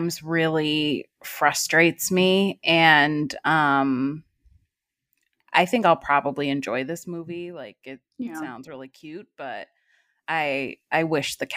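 No technical faults to report in this speech recording.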